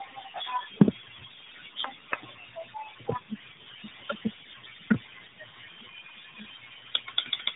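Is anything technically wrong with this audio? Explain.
Yes. Throughout the clip there is tandem speech coding: the call passed through three speech codecs in a row, each re-encoding the previous one's degraded output. The speech sounds rough, muffled and warbly, with nothing above 3.8 kHz, which fits a chain ending in AMR-NB.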